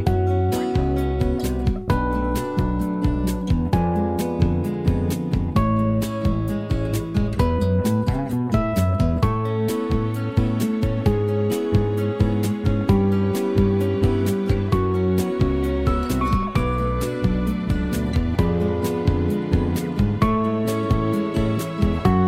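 Nothing stood out as a technical problem on listening to this audio.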